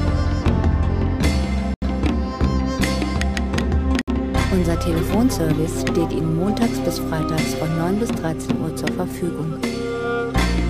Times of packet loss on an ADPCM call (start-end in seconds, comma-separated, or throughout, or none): none